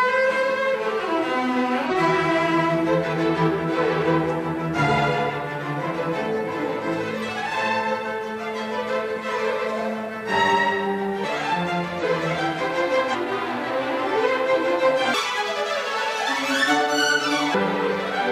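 Compressed frames are skipped at 0.70, 1.86, 11.20, 11.99 and 13.10 s. At each point whole blocks of the encoded stream never reach the output, so the audio jumps forward by about 150 ms, 700 ms, 700 ms, 500 ms and 700 ms. The jump sizes fit frames of about 46 ms. Unlike a dropout, no silence is inserted. The sound simply resumes further along.

From 15.14 to 17.54 s the section plays at the wrong speed, 1.69 times as fast. It rises about ten semitones and hurries at the same moment. That tight link between pitch and tempo separates it from a pitch shift, which changes pitch alone, and from the skips, which lose material without changing pitch. The likely cause is a stretch being played against the wrong clock.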